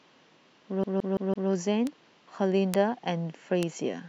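Speech carrying two kinds of digital fault. From 0.84 to 1.50 s the sound is caught in a CD stuck on one turn: a scratch sends the laser back a track at the same point on each revolution, so one 167 ms slice of speech plays four times with a brief mute at every jump. That even, machine-gun stutter of identical material sets it apart from a random dropout or glitch. Later come three bit error spikes, at 1.87, 2.74 and 3.63 s, each a flipped bit spanning two or three samples whose value leaps by a power of two and snaps back. Each is heard as one sharp broadband tick with no relation to the speech. Unlike the skip, nothing repeats, and each spike is far shorter than the loop.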